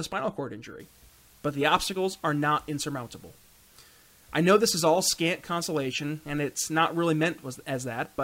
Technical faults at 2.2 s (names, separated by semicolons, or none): low bit depth with dither